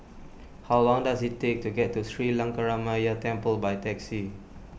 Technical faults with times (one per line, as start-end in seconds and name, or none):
none